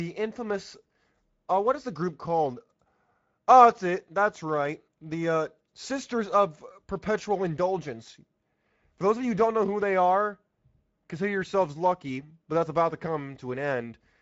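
Speech runs through the Speex codec for its whole length, and the damage is plainly audible throughout. The voice sounds grainy and hoarse because the excitation is coded with too few bits, and the sound stops at 7.7 kHz, which fits wideband Speex at a middle setting near 17 kbps. Above about 4 kHz the sibilance becomes a shaped hiss instead of true detail. Unlike a low-bitrate transform codec such as MP3, it has no swirling, watery smearing. The damage is a buzzy, noise-laden roughness in the voice itself.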